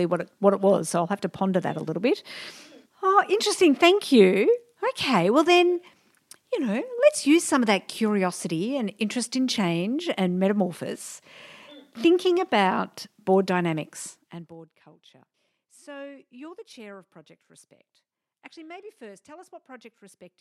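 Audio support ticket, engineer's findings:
Zipper noise, 14.08 to 14.65 s. Fast ticking rides on the speech while the level drops by about 20 dB. The drop comes in 1 dB steps, around 40 a second, with no smoothing, so each jump clicks. Probable culprit is a gain stage updating once per buffer without a ramp.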